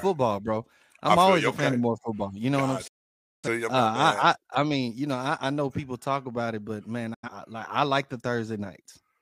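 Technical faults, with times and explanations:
2.87–3.48 s and 7.14–7.29 s, digital broadcast dropout: the speech cuts out twice, each time with a very fast fade of about 8 ms to silence. The receiver stopped getting decodable frames and muted until valid ones returned. About 0.55 s of programme is lost in the first gap, which fits a run of a dozen or more missing frames. About 85 ms is lost in the second, which fits a couple of frames. The sound then resumes later in the programme, skipping whatever was broadcast during the gap.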